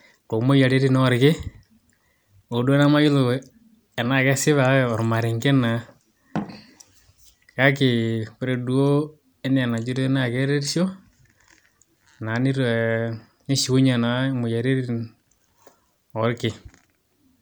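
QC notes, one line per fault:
No faults heard in this clip.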